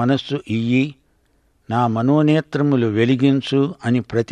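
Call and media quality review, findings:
Nothing to log on this speech clip; I listened through and heard no faults worth a ticket.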